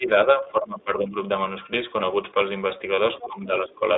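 Throughout the clip the speech sounds boxy and slightly rough, with a faintly synthetic edge. There is no deep bass and no sparkle above about 3.7 kHz. This is the iLBC codec at work. It is a narrowband VoIP coder that passes only roughly 300 Hz to 3.7 kHz and codes each 20 ms frame's excitation on its own, and its damage is plainly audible here. The quality fits its 15.2 kbps mode.

Right at the start, from 0.00 to 0.09 s, and again from 0.25 to 1.16 s, the speech dips and thins, losing level and high end in uneven pieces. The first dip is around 15 dB deep and lasts about a tenth of a second. The second goes down as far as around 20 dB and covers roughly 0.7 s in all. This is likely speech suppressed in double talk: with both ends talking, the echo canceller could not tell the near talker from the loudspeaker echo and turned everything down.

From 2.96 to 2.99 s a brief held, slightly buzzy sound briefly replaces the speech, and the voice is back to normal almost immediately. 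That is a lost iLBC frame, consistent with a single missing 20 ms frame. The decoder filled the gap by repeating the last pitch cycle mixed with noise, and because each frame stands alone, recovery is almost instant.

At 3.20 to 3.24 s a faint scrap of a second voice slips in, about 20 dB below the main speech. This is likely the other side's voice leaking through: the far end was playing on the talker's loudspeaker, and the echo canceller left a residue in the microphone signal.

Almost at once, from 3.21 to 3.83 s, the main speech ducks again by around 15 dB over roughly half a second. This is likely double-talk suppression once more, triggered by that same overlap.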